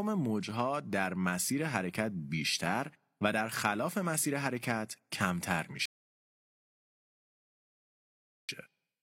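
At 5.86 s the speech cuts to silence for 2.63 s, a rebuffering stall. The player ran dry and waited, then resumed at 8.49 s exactly where it stopped.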